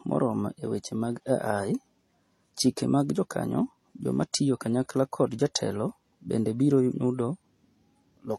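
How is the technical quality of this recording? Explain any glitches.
The quality is compromised throughout by what sounds like transcoding between lossy codecs, likely an MP3 encode at around 40 kbit/s later re-encoded as HE-AAC at around 32 kbit/s. The second encoder spent its small budget reproducing the first one's artefacts while adding its own. The speech carries nothing above 14 kHz and stays dull and band-limited, with swirly, smeared detail and a grainy, metallic edge running through the whole clip.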